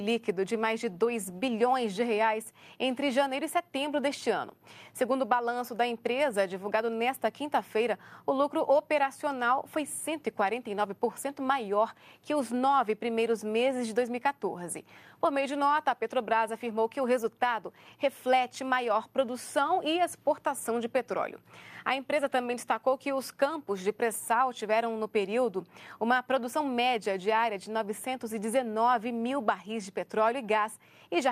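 Nothing goes wrong anywhere in this one; there's no glitch, dropout or other technical fault to point to at any moment in the audio.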